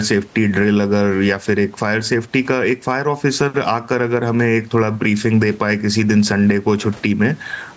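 The speech clip has gain pumping throughout. The room noise behind the talker sits about 36 dB below the speech and is band-limited along with everything else to nothing above 8 kHz by the call's microphone processing, and the gain swings by roughly 10 dB. The likely cause is input gain set far too high, with a fast limiter or compressor clamping down on every loud syllable and letting go in the gaps, which also squashes the speech so loud and soft parts sit unnaturally close. Unlike a noise gate or noise suppressor, which cuts the background away between phrases, gain pumping raises the gain in the gaps rather than cutting it.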